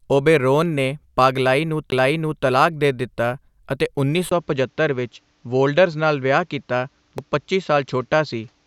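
Speech, with two kinds of fault. A CD skip ticks at 1.90 s after "ਓਬੇਰੋਨ ਨੇ", with a brief mute and a jump to a different place. Another CD skip at 7.18 s is a tiny dropout. At 4.29 s, after "ਦਿੱਤਾ ਅਤੇ ਉੱਨੀ", a 20 ms silence is followed by duller sound with nothing above 7.6 kHz and faint new background noise at the same level. The likely cause is the input switching to a poorer device.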